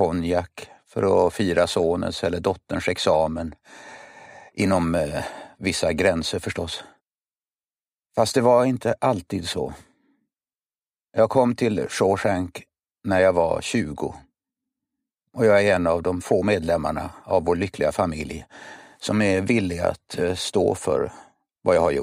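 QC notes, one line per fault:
No technical faults are audible anywhere in the audio, and the signal holds steady throughout.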